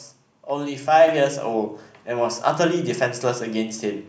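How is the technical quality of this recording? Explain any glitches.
The recording has one clear glitch: a microphone volume step-up at about 1.08 s. The call software judged the microphone input too quiet and raised the device's input volume in a single jump of about 5 dB rather than ramping it gradually. Because the change happens before the signal is processed, the speech and the background noise both get louder at the same instant, giving an abrupt lift in level partway through the clip.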